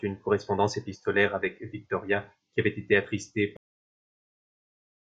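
At 3.57 s the speech suffers a cut-off end: the final stretch of audio was never written out, so the sound halts mid-utterance and drops straight into digital silence for the rest of the clip. Unlike a fade-out or a natural pause, it has no decay and never resumes.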